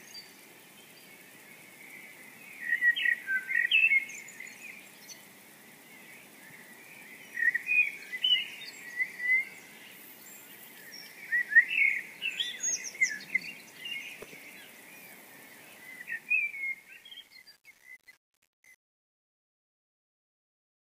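Truncation distortion on a fade runs from 15.72 s to the end of the clip. The fade was computed without dither and with too few bits, consistent with roughly 8-bit resolution, so as the level drops the waveform collapses into coarse steps, leaving a gritty, stepped tail.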